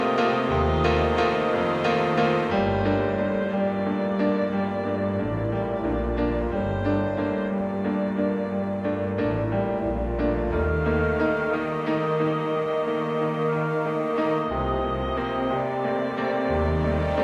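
No faults are audible anywhere in the recording.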